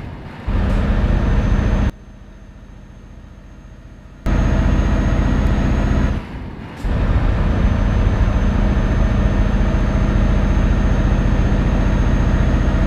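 From 1.90 to 4.26 s, one channel is likely inverted in polarity, so when the channels sum to mono their shared content cancels. The sound drops by about 23 dB, leaving only a faint residue of the stereo difference until full level returns.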